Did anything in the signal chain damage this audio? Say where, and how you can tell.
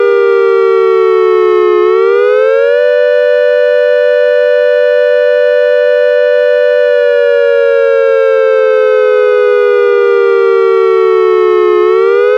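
Yes. The damage happened in the analogue wiring, where the audio circuit shares a ground with the computer. Changing processor, graphics or mouse load pushes currents through that ground and adds computer activity noise to the signal. Throughout the clip, a buzzy, chirping pulse at around 150 Hz sits roughly 40 dB below the sounds. It rises and falls with the machine's activity, not with the recorded sounds, which shows it came from the electronics.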